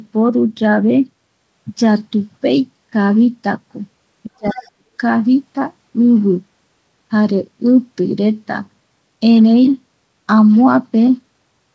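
Speech suppressed in double talk, 4.28 to 5.0 s: the talker cuts out in pieces, dipping around 40 dB, likely the echo canceller muting overlapping voices. Other side's voice leaking through, 4.46 to 4.71 s: a faint second voice about 20 dB down, likely loudspeaker echo the canceller failed to remove.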